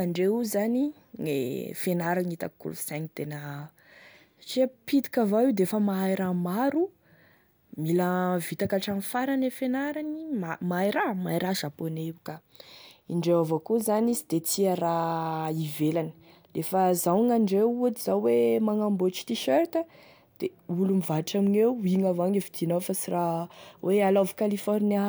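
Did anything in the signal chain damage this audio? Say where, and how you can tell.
No, nothing in the signal chain damaged this audio.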